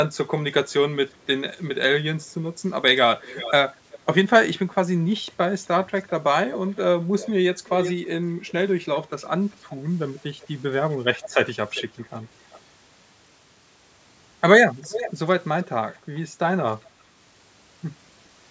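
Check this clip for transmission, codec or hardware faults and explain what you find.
One fault recurs: an echo leak, heard at 0.15–1.17, 3.18–3.99, 4.72–7.93, 8.47, 9.51–12.6 and 14.82–15.97 s. A delayed copy of the speech returns about 0.38 to 0.40 s late, likely from a far-end loudspeaker whose echo canceller let residue through. The copy is very faint at first, then reaches about 10 dB below the speech. Unlike room reverberation, it is a distinct repeat rather than a smooth decaying tail.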